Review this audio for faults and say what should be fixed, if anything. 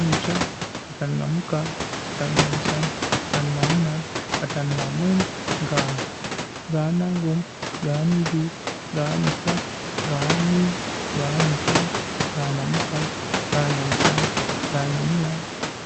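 Nothing here needs fixing; the speech comes through the call connection as you'd expect, with the room's own background noise sitting about 6 dB below it.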